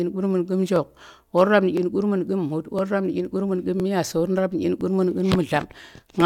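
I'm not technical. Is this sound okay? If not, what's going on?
No. There's a fault called overlapping chunks. Every second, a tiny 12 ms slice plays twice, causing a small click or stutter at 0.76, 1.77, 2.79, 3.80, 4.81 and 5.82 seconds.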